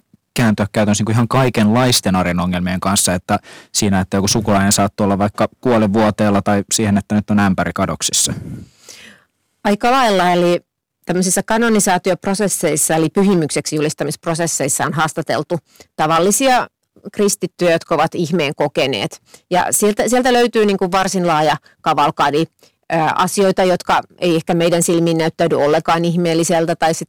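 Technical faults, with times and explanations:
Throughout, hard clipping: the speech is driven about 13 dB past what the chain can pass, so roughly 7% of samples get sliced flat, giving that harsh fuzz on every loud syllable.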